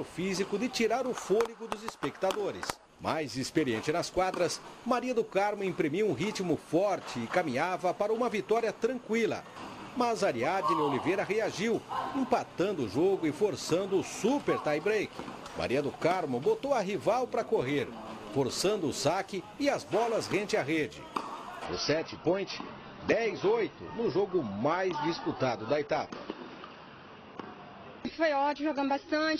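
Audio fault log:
21.65–29.39 s, adaptive stream at a lower bitrate: gapless sudden switch; spectrogram shows nothing above 6.5 kHz, consistent with a low-bitrate fallback after the link slowed.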